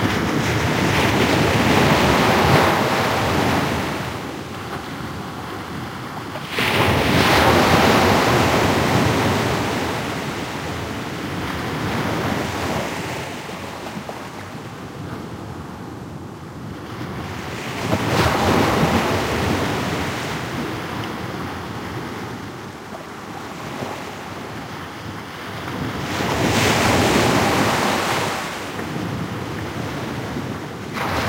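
Crude rate conversion runs throughout: samples are repeated rather than filtered, which fits a 32 kHz source taken to 44.1 kHz. An error about 20 dB down adds gritty, inharmonic fizz to loud, bright passages. A spectrogram shows faint mirrored lines, and the waveform shows small stair-steps.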